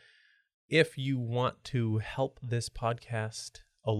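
Nothing goes wrong anywhere in this bit of speech, so there's no fault to point to at any moment.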